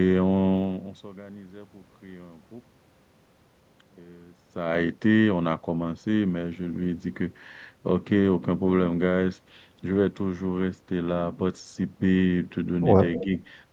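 From 0.52 to 1.08 s, zipper noise ticks as the level falls roughly 20 dB. It drops in unsmoothed 1 dB steps, about fifty a second. It returns from 4.34 to 4.8 s as the level climbs back.

At 13.16 s, a faint delayed copy of the speech appears for about 0.08 s. It trails by 264 ms, roughly 15 dB down, likely an echo leak.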